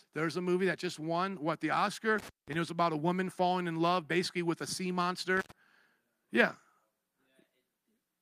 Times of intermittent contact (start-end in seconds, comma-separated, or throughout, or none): 2.18-2.55, 5.37-5.52